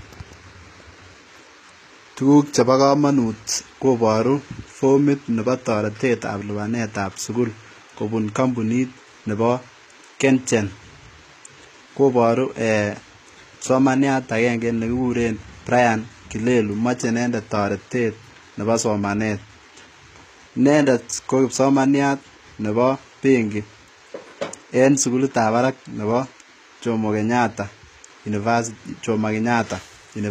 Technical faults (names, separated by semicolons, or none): HE-AAC compression